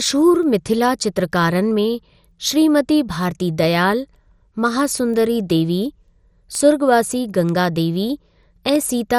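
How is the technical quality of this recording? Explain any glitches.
The recording has two clear technical faults: a dull, gurgling coding distortion throughout the speech, and a regular series of ticks running almost the whole length.

MP2 compression (throughout): The speech was likely squeezed through an MPEG Layer II encoder at a low bitrate, around 64 kbps. Too few bits forced upper sub-bands off and left the rest coarsely quantised. Nothing is heard above 15.1 kHz, and the voice sounds dull and granular.

Word clock ticks (0.43 to 8.90 s): A receiving device running on its own clock, roughly fifty parts per million apart from the sender, periodically slips one sample. Each slip produces a sharp tick, about every half second, around twenty in all, of uneven strength.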